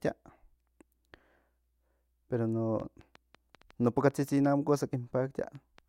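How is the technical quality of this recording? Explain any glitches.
The recording has one clear glitch. From 2.8 to 5.79 s, a train of clicks appears. Roughly ten irregular pops, about 3.7 per second, reach speech level. Likely cause: interference or a faulty connection or power supply injecting pulses.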